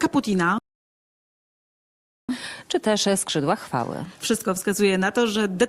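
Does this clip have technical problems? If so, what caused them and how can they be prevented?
Yes. A playback stall cuts the sound off abruptly at 0.58 s and leaves silence until 2.29 s, a gap of about 1.7 s before the audio resumes. The likely cause is that the player ran short of data or its output thread was blocked, so nothing reached the output until it recovered. Packet-loss dropouts last only tens of milliseconds, often with concealment smoothing them, while this is one long, clean silence in mid-flow. A larger playback buffer and keeping the audio thread free of blocking work would prevent it.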